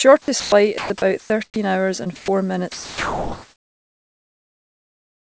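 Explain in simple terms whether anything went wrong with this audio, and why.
Sound chopped by the voice detector, at 0.22 to 0.52 s, 0.78 to 1.56 s and 2.04 to 2.28 s: quiet stretches of speech drop out into hiss, likely because the sender's speech detector briefly switched off transmission.

Comfort noise in place of the background, from 2.72 s to the end: the real room sound gives way to a smooth, slightly quieter artificial hiss, likely filling a pause when the sender stopped sending audio.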